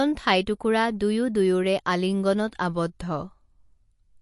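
From start to finish the speech carries plainly audible MP3 compression damage, and a low-bitrate MP3 encode is the likely cause. Nothing comes through above about 11.3 kHz, so the treble stops at a hard shelf, and the sibilants turn dull and chirpy. With too few bits to go round, the encoder drops the quieter detail, and that detail flickers in and out frame by frame. The result is a watery, swirly texture, and consonant onsets come out smeared rather than crisp.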